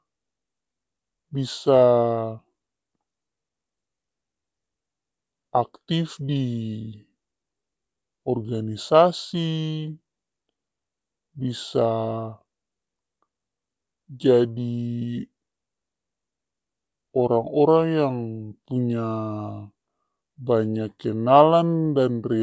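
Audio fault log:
throughout, wrong sample rate: the speech is dragged low and slow, running at about 0.73 times its proper speed and pitched roughly 5.5 semitones down, so voices sound heavy, thick and sluggish. Speed and pitch have dropped together by the same ratio, the sign of samples replayed at a slower rate than they were captured at with no conversion. The ratio fits audio recorded at 22 kHz but played back at 16 kHz.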